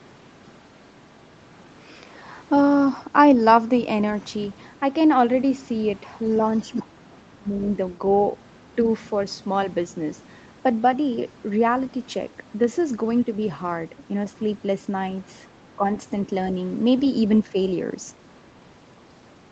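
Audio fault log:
6.34–7.69 s, other side's voice leaking through: a faint second voice in three scraps at 6.34–6.83, 7.12–7.16 and 7.64–7.69 s, about 20 to 35 dB below the talker. It is likely loudspeaker echo that the echo canceller did not remove.
6.72–7.61 s, speech suppressed in double talk: the talker's level drops by up to about 25 dB across roughly 0.7 s while the other side overlaps. The likely cause is the canceller turning down the whole signal during overlap.
17.46–17.56 s, speech suppressed in double talk: a short dip of about 5 dB lasting roughly 0.1 s, likely the same overlap suppression in a milder form.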